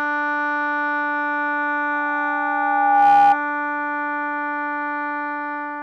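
At 1.93 s a loudspeaker feedback squeal starts in the music. A microphone is picking up its own loudspeaker, and the loop gain passes one at 810 Hz. The tone swells for roughly a second, rising to about 10 dB above the music. It stops at 3.38 s.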